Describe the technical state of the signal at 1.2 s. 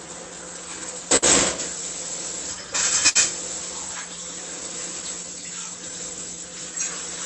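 At 1.2 s the signal sits inside a short stall from a late packet, running from 1.16 to 1.24 s. A packet failed to arrive on time, and the jitter buffer ran dry. The receiver held the last sound for 59 ms until the data caught up, then resumed where it stopped. Nothing is lost. The sound simply hangs a moment too long, with a faint buzz or dip, and the playout delay grows by 59 ms.

The stall falls within a longer run of repeated timing corrections, lasting from 0.06 to 6.73 s. The receiver keeps inserting small repeated pieces to stay aligned with the incoming stream. Playback runs at about 98% speed, and roughly 150 ms is added over the span. Each edit is tiny and unevenly spaced. At most, they come across as slight hiccups or a faintly unsteady pace.

Underneath both is clock drift between sender and receiver, present for the whole clip. The sender's clock runs slow, by something like 5%. 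The receiver's buffer therefore keeps draining. That drives the steady stream of stretching corrections and makes a momentary underrun like the one at 1.2 s more likely. The result is recurring small timing stumbles at uneven intervals.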